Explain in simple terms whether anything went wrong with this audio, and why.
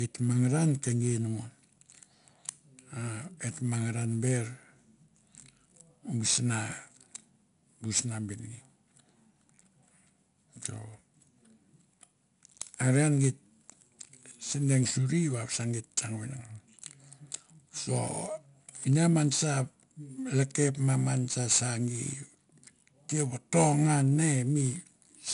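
The speech has a gritty hiss from start to finish. That is 4-bit ADPCM compression. Each sample is saved as a tiny rough step, so loud parts get grainy noise that rises and falls with them. Nothing above 10.6 kHz remains, which dulls the sound.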